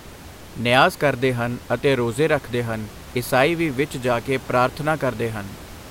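No technical faults can be heard anywhere in the speech. A steady room noise sits about 19 dB below the voice, part of the recording space rather than anything the system did.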